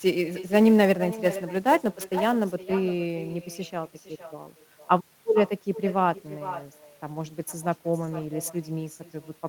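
Echo with no canceller runs through the whole clip: the far end's loudspeaker feeds its microphone and nothing removes it, so every phrase returns about half a second later as a thinner copy, roughly 15 dB below the speech.

Sample clock jitter affects 0.0 to 2.55 s. The converter's unstable clock samples slightly early or late, around ten microseconds of wobble, giving a roughness some 25 dB under the signal that swells on loud, bright syllables and disappears in pauses.

Lost packets rebuilt from error correction occur at 7.15 to 7.29 s and 8.01 to 8.27 s, rebuilding 80 ms and 140 ms from several packets each. There are no gaps, but the decoder plays low-bitrate backup copies, so those stretches sound rougher and noisier.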